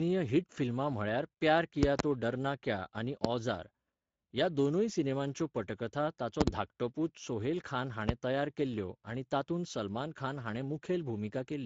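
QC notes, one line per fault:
Throughout: Speex codec damage, plainly audible across the speech. The sound is hoarse and noisy, the character of a CELP coder short of bits for the excitation signal. The character points to a bitrate around 16.8 kbps. Nothing is present above 7.7 kHz, and the upper band just below that limit sounds like shaped noise rather than real detail.
1.83–2.02 s, 3.25–3.27 s, 6.41–6.50 s, 8.09–8.12 s: loud pop. These are sharp transient hits that stand roughly 25 dB above the speech, which carries on underneath. The events at 1.83 s and 6.41 s are double pops in quick succession, while 3.25 s and 8.09 s are single. Each has the abrupt onset of a voltage step or pulse shaped by the downstream circuitry, likely from a connector, switch, static discharge or driver glitch.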